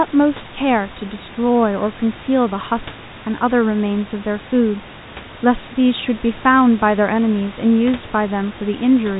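There are no technical faults to describe at any point in this speech recording.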